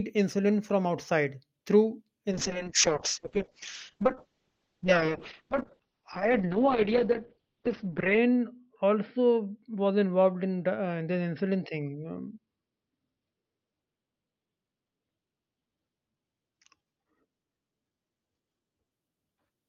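From 2.32 to 18.97 s there's a call bitrate drop. The encoder starved, likely heading toward 6 kbps, so highs vanish above 6 kHz and speech turns rough and muffled.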